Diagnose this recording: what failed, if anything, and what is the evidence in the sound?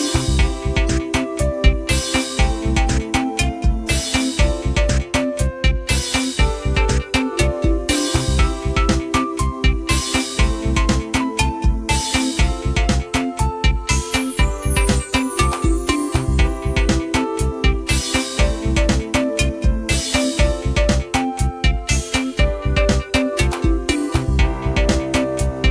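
Nothing in the signal chain points to a failure: the audio runs continuously with no breaks, distortion, or timing disturbances that would implicate any stage.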